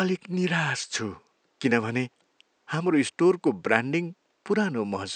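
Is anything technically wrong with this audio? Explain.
No, nothing stood out on listening to this speech, and the faint room noise sits about 47 dB below the voice.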